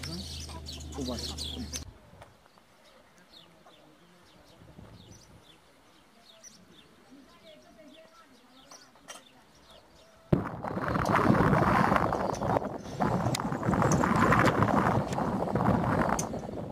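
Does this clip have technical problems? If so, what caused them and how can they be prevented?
No, nothing in the audio points to a technical fault, so there is nothing to trace or prevent.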